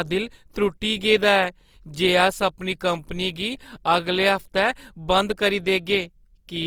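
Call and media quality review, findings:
Likely Opus compression, CELT mode, consistent with 24 kbps, throughout: starved bands noise-filled, speech grainy and rough, damage plainly audible; bandwidth kept up to 20.2 kHz.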